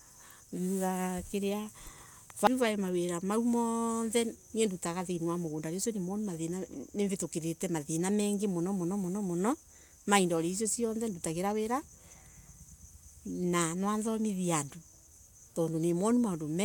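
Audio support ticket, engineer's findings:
Nothing stood out on listening to the speech in this recording.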